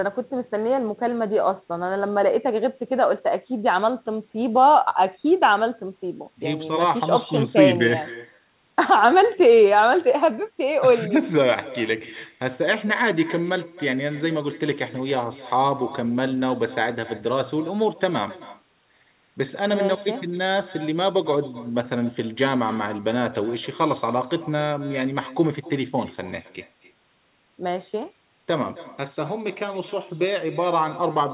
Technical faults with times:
0.00-31.34 echo with no canceller

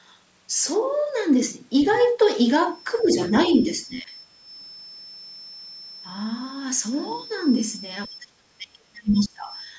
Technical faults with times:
1.82-2.08 other side's voice leaking through
2.98-3.06 other side's voice leaking through
3.03-3.19 speech suppressed in double talk
3.41-3.52 other side's voice leaking through
3.84-4.15 speech suppressed in double talk
8.07-9.69 speech suppressed in double talk
9.14-9.29 other side's voice leaking through

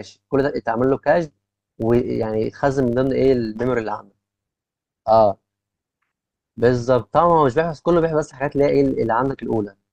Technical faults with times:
0.00-9.93 filter restarted on every block

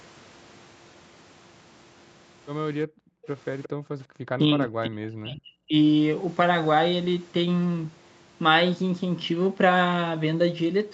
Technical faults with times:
2.87-3.27 background gated by the echo canceller
3.63-3.69 echo leak
3.69-3.99 background gated by the echo canceller
4.31-5.74 speech suppressed in double talk

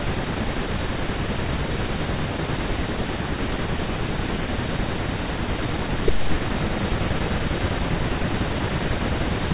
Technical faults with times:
none

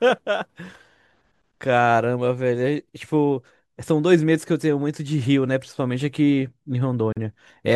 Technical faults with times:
7.13-7.17 gap at a join of encoded pieces

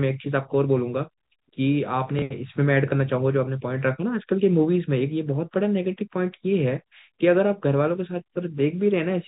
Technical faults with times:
2.19-2.22 packet loss with last packet repeated

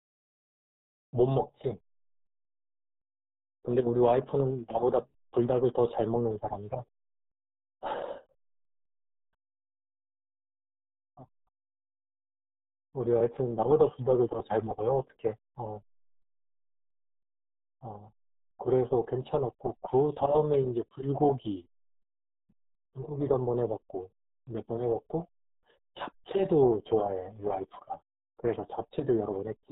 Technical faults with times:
0.00-29.71 RealAudio 14.4 codec

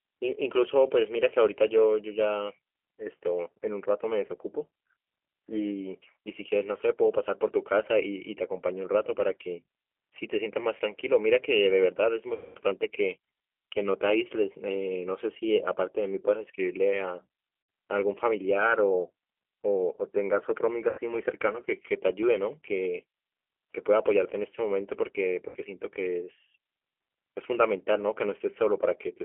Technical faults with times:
0.00-29.24 G.729 codec
4.26-4.32 VoIP packet loss concealed by the speech codec
12.34-12.59 VoIP packet loss concealed by the speech codec
17.63-17.69 VoIP packet loss concealed by the speech codec
20.89-21.01 VoIP packet loss concealed by the speech codec
25.49-25.57 VoIP packet loss concealed by the speech codec

